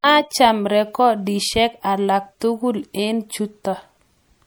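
Throughout the clip, the speech likely passed through MP3 compression at a bitrate that points to about 64 kbps. Starved of bits, the encoder discards frequency detail, leaving plainly audible codec damage.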